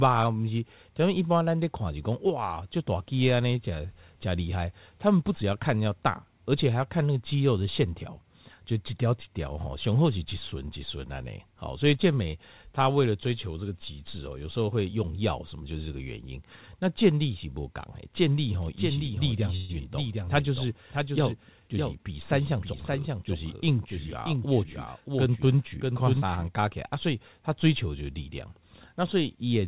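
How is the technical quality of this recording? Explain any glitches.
The recording has three audible faults, all between about 18.6 and 26.5 s. It came through a phone-style call path with nothing above 4 kHz.

Doubled audio track, 18.62 to 26.48 s: A second full-band copy of the sound runs about 0.7 s behind the original, likely because the audio was captured a second time through a slower path. That copy sits only about 5 dB below the original and has no decay or room colour, so it reads as a distinct echo. It switches on and off abruptly at those two points.

Call audio freeze, 19.56 to 19.71 s: Packets likely stalled in transit, and the jitter buffer ran dry. For 129 ms the receiver stretched the last sound into a fading buzz rather than dropping to silence. When the packets arrived, the audio resumed exactly where it paused. Nothing is lost, but everything after that point arrives 129 ms later than it should.

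Jitter buffer speed-up, 21.6 to 23.0 s: After the freeze, the buffer held more audio than its target. To trim the backlog, the receiver repeatedly cut out tiny pitch-period slices, removing roughly 150 ms in total. The sound plays at about 109% speed with unchanged pitch, so this stretch comes across as hurried.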